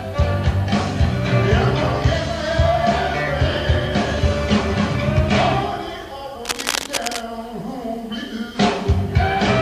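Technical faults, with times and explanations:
6.44–7.24 s, cable scratch noise: a dense, ragged scratching sits over the sound, fairly loud, likely from a worn connector being moved; spectrogram shows broadband speckled bursts.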